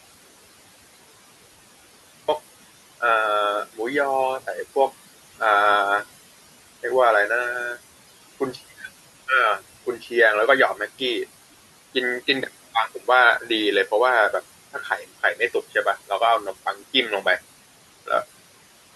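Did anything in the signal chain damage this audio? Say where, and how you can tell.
Yes. The clip opens with an audio dropout to silence at the input stage, already under way when the audio begins and lasting until 2.28 s. Those first seconds are pure silence with no room tone, so no quiet microphone was picking anything up. The input signal was most likely lost, through a disconnected device, a failed link or a mute, while the recorder kept writing empty samples. Whatever happened in that span is gone.

In the call-processing stage, noise suppressor artifacts run through the whole clip. The room noise sits about 17 dB below the speech, and the suppressor pulls it down by about 16 dB, working frame by frame on bands it judges to be steady noise. As a result the background drops away in the pauses and swells back under the talking.

The same suppressor also causes speech cut by the noise suppressor at 14.74 to 15.05 s and again at 16.66 to 16.82 s. 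In each span, roughly a tenth of a second of quiet speech energy was classed as noise and attenuated along with the background, by about 8 dB the first time and about 10 dB the second. Those bits of speech sound swallowed and faint, as if the talker briefly dropped away from the microphone.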